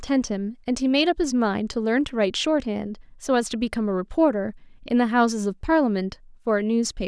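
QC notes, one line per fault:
No faults found in this speech recording.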